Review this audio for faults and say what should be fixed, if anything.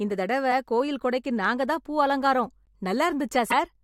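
The speech jumps forward at 0.51 s and from 3.50 to 3.54 s, each time losing about a tenth of a second: compressed frames skipped, missing or rejected by the decoder. Prevent it by checking file integrity and using error-protected transport.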